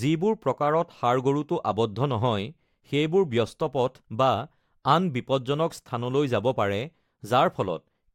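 Nothing is technically wrong with this speech recording.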